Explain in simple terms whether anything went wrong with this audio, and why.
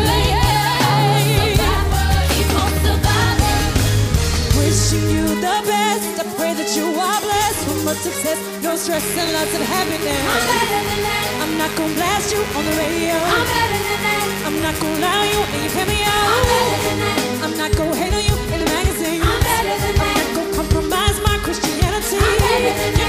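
Electrical interference from the 50 Hz mains supply leaked into the recording chain between 8.93 and 16.93 seconds. Sharp switching spikes entered the signal twice in every mains cycle. This fault is called mains buzz. Because the spikes are so abrupt, they produce a whole stack of tones climbing from 50 Hz up into the kilohertz range. For those eight seconds you hear a steady, raspy buzz, fairly loud, sitting underneath the sound.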